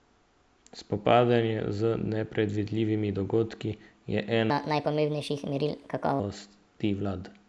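From 4.50 s to 6.20 s the speech jumps into a wrong sample rate fault: the samples run 1.38 times too fast with no conversion, so pitch rises about 5.5 semitones along with the speed, which fits 16 kHz audio played back at 22 kHz. Voices sound chipmunk-high and rushed. On a spectrogram, harmonics and formants shift upward together and syllables squeeze narrower in time; the waveform shows each burst compressed horizontally.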